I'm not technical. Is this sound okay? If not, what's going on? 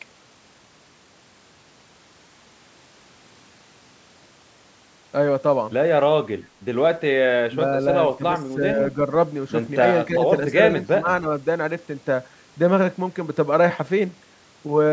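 No. This is likely speech suppressed in double talk: when both sides spoke at once, the call's echo control mistook the voice for echo. It briefly turned the voice down or cut it at 7.48–7.6, 8.18–8.34, 8.54–8.78, 10.08–10.25 and 10.9–11.26 seconds.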